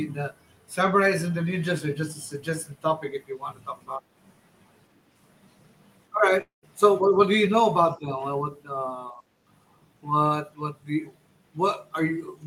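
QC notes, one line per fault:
6.41–6.65 s, long network dropout: sound turns into a fading buzz, then silence, likely from lost packets. The waveform flattens and the spectrogram shows a blurred smear, then an empty gap.
7.01–7.16 s, 7.96–8.21 s, 9.11–9.21 s, speech suppressed in double talk: the speech dips by about 10, 10 and 5 dB, likely from the echo canceller. The waveform shows a narrowed envelope.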